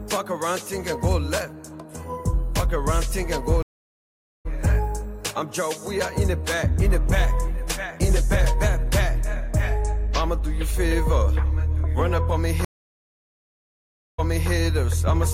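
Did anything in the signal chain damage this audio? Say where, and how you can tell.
Yes. A stream reconnect at the network stage broke the playback twice. From 3.62 to 4.46 s there are 825 ms of silence, and the sound resumes about half a second further on. From 12.65 to 14.51 s a 1.5 s gap ends with a 325 ms replay. The connection dropped, and a fresh decoder joined mid-stream. On a spectrogram each gap is a blank vertical band with no decay tail, and the waveform goes flat, then fades back in.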